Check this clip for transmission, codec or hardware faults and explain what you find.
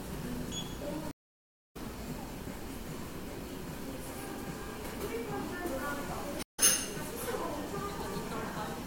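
Two stream reconnect faults occur. At 1.11–1.77 s and 6.43–6.60 s the connection drops, leaving a blank waveform gap of about 0.64 s and 0.15 s, then a fresh decoder resumes slightly later, skipping roughly 0.4 s and a brief fraction of the sound, with the first frame fading in.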